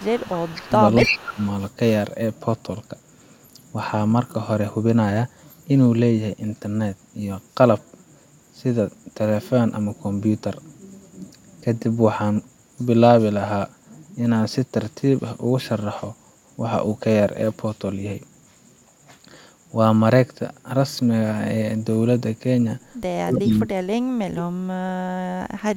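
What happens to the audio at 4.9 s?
Nothing goes wrong at 4.9 s; the speech carries on intact through that moment, with no dropout, click or distortion.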